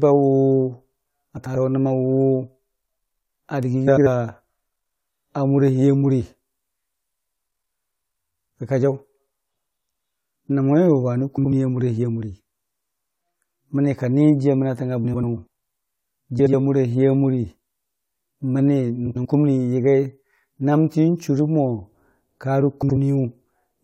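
Frames out of order at 1.37–1.56, 3.87–4.07, 11.38–11.51, 15.04–15.24, 16.39–16.53, 19.06–19.26 and 22.82–22.97 s: two adjacent blocks of about 70 or 93 ms swap places, so the speech flutters. On a spectrogram, the formant tracks jump at three seams, with no gap in time.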